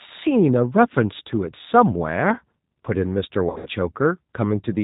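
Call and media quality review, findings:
G.729 codec path at about 8 kbit/s throughout: speech rebuilt from vocal-tract filter, pitch predictor and sparse pulses. Result: band capped at 4 kHz, rough synthetic speech quality, plainly audible coding damage across the clip.

VoIP packet loss concealed by the speech codec, 3.50–3.70 s: roughly 140 ms missing, scattered over 160 ms, longest gap 80 ms, pointing to several lost packets. Decoder extrapolates last pitch and filter, fading gain. Audible stretched buzzy tone or coloured noise; speech weak briefly after recovery.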